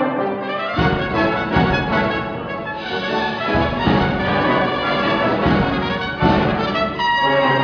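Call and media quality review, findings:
No faults found; the signal shows no audible dropouts, distortion, level problems or timing irregularities anywhere in the capture.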